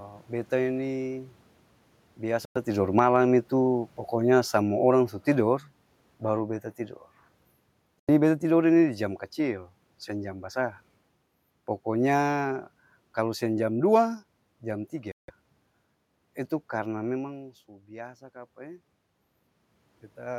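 From 0.53 s to 9.66 s, automatic gain falling lowers the speech and the room noise together by about 9 dB, so the waveform envelope tapers steadily and the spectrogram's background darkens.

Abrupt dropouts of 103 ms at 2.45 s, 81 ms at 8.00 s and 166 ms at 15.12 s are each likely a Bluetooth stall, where the headphone buffer ran dry. Each shows as a flat-line gap in the waveform and a blank vertical strip across all frequencies in the spectrogram.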